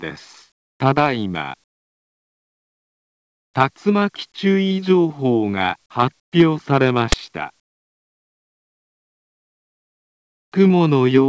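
Discontinuous transmission is the likely cause of the four quiet stretches: the sender appears to stop transmitting when no activity is detected, and the receiver fills the gaps with comfort noise in place of the background. This happens at 0.52 to 0.80 s, 1.64 to 3.54 s, 6.20 to 6.32 s and 7.60 to 10.52 s. In each, the real background gives way to a steady, featureless hiss that is about 18, 27, 21 and 27 dB quieter respectively.

At 7.12 s, an uninitialised buffer went to the output before any audio had been written to it, so stale memory was played as samples. The result is a single loud burst of digital noise lasting about 12 ms, which fits a 512-sample buffer. Throughout, the call codec band-limits the audio, leaving nothing above 8 kHz.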